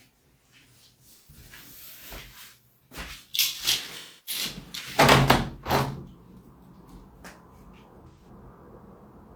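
Everyday sounds with three brief stretches of AAC frame loss with concealment, at 1.17 to 1.36 s, 3.97 to 4.43 s and 8.08 to 8.29 s. The decoder patches each gap from the last good spectrum, so instead of a clean silent dropout you hear a smeared, phasey fill, longest around 4 s.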